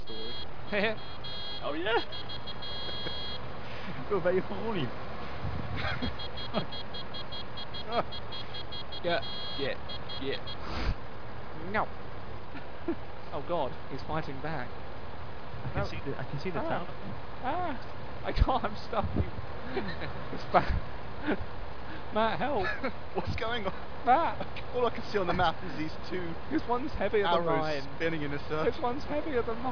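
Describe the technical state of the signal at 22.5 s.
At 22.5 s the signal is intact, with no dropout, distortion or other audible fault.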